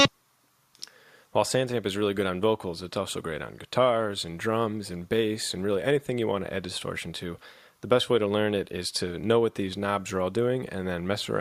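No technical faults are audible anywhere in the audio.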